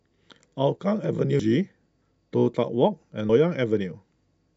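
Audio missing between chunks, at 1.39 s and again at 3.29 s: at each point the speech skips forward, losing about a tenth of a second, and the sound on either side is butted together with no gap of silence. The regular spacing points to a likely cause in a recorder or processor handling the audio in 2 s chunks and dropping a short stretch each time it closes one chunk and starts the next.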